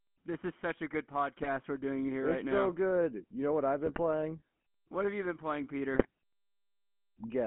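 A speech recording passed through the GSM full-rate codec, whose character fits the 13 kbps first-generation GSM stream. That coder models the vocal tract and excites it with coarsely spaced pulses, so fine detail is discarded and the line keeps only about 200 Hz to 3.4 kHz. Throughout, the voice sounds plainly buzzy and gravelly, thin and boxy, with no air above the band. On top of that, GSM bit errors strike three times: 1.38 to 1.47 s, 3.86 to 4.00 s, and 5.94 to 6.06 s. Corrupted bits reaching the decoder, on the order of one to two percent, scramble the filter, pitch and gain values for a handful of consecutive frames. Each burst, lasting roughly a tenth of a second, breaks the voice into squawks, pops and gargling as the spectrum warps and the level jumps.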